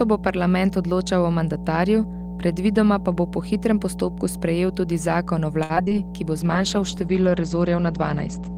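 Mains hum runs through the whole speech clip: a steady 60 Hz tone with low harmonics, loud enough to sit only a little below the voice. It suggests a ground loop or nearby transformer leaking the power line into the signal path.

Repeated packet loss (robotic sound) occurs from 5.63 to 5.94 s. Audio went missing in a quick series of short holes, the longest about 64 ms. Each was patched by stretching the preceding sound, so roughly two-fifths of that span is synthetic and sounds choppy, with pieces missing.

A call bitrate drop starts at 6.38 s and lasts to the end. The encoder fell from 32 to 12 kbps and narrowed its bandwidth from 20 kHz to 8 kHz for about 1.85 s, so the speech turns coarse, watery and muffled, losing its upper detail.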